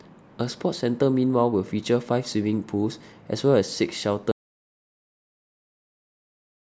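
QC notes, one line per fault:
4.32–6.72 s, audio dropout to silence: the speech cuts out mid-flow into dead silence with no room tone, likely a lost input while recording continued.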